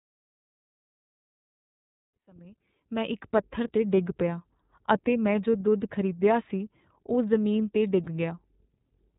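Speech coded with the iLBC codec throughout: the spectrogram shows nothing above 4 kHz, and the plainly audible rough, slightly synthetic texture fits iLBC's 30 ms frame mode at around 13.3 kbps, with each frame's excitation coded on its own. The gentle fade-in, complete by about 3.6 s, is a smooth rise in the waveform envelope. From 8.04 to 8.07 s there are lost iLBC frames, consistent with a single 30 ms packet. The decoder fills the gap by repeating the last pitch cycle blended with noise, heard as a brief buzzy held vowel. On the spectrogram it shows as flat, smeared harmonics, and in the waveform as a short stretch of near-identical repeated periods. The sound recovers immediately afterward because each frame decodes independently.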